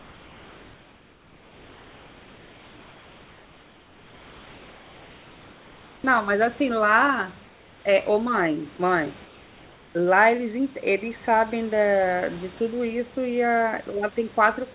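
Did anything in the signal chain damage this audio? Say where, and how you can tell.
Yes. The damage sits in the call processing on the sending side, in the discontinuous transmission stage. This is comfort noise in place of the background. From 0.0 to 6.04 s, 7.45 to 7.85 s and 9.25 to 9.95 s, the genuine room noise gives way to a steady, featureless hiss about 3 dB quieter. That is likely the receiver synthesising noise while the sender stopped transmitting. A spectrogram shows smooth, uniform texture there, inside the same 4 kHz ceiling as the rest of the call.

There is also sound dropped by the voice detector at 8.77 s. A brief fragment of speech vanishes and is replaced by the same flat noise for about 20 ms, likely as the detector judged the sound to be background and stopped sending for an instant. On the waveform, the speech envelope shows a tiny notch filled with low, even noise. 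The spectrogram shows a thin vertical gap in the harmonics with a smooth noise floor where they break off.

Finally, the onset is clipped by the voice detector at 9.93 s, right as the 9.25 to 9.95 s stretch of synthetic background ends. Speech resumes abruptly, with roughly the first 20 ms of its rise missing, likely because the detector was slow to recognise that sound had restarted. The waveform shows the envelope jumping from flat noise straight to speech, with no gradual attack. On the spectrogram, harmonics appear with a hard vertical left edge.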